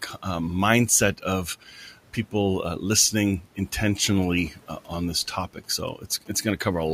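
It's a speech recording with two problems. From 1.62 to 1.93 s, speech gets cut by the noise suppressor: roughly 150 ms of it is mistaken for noise and pulled down by up to about 9 dB, so that stretch sounds swallowed. From 4.23 to 6.36 s there are GSM signalling bursts, a galloping dit-dit-dit of short buzzes at 217 Hz, roughly 20 dB under the speech, from a nearby 2G phone whose radio bursts the audio circuitry rectifies. The room noise, sitting about 24 dB below the speech, belongs to the recording rather than the system.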